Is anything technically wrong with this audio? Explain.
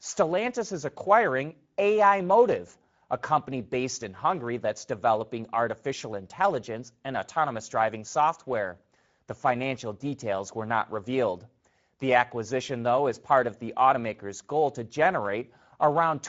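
Yes. Throughout the speech, Speex codec damage is plainly audible. This CELP coder starves the excitation of bits, making speech hoarse and noisy, which fits a mid setting near 17 kbps. Nothing reaches above 7.7 kHz. Unlike a simple band-limit, the top band is a noise-like fill, not clean dullness.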